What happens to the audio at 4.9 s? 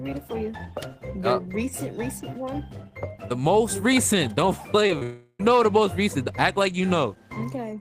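Short concealed packet loss hits twice, 4.87–4.91 s and 4.99–5.03 s: about 20 ms went missing each time, and the receiver extrapolated the preceding sound to cover it, giving brief smeared wobbles rather than silent dropout gaps.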